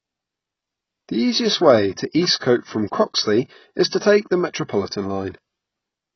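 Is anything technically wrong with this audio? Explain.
Yes. AAC compression runs throughout the speech: nothing is present above 6 kHz, and what remains sounds dull, smeared and warbly, with fizzy sibilants. This is likely a low-bitrate AAC-LC encode that cut off the highs and coarsely quantised each frame, which fits roughly 16 kbps.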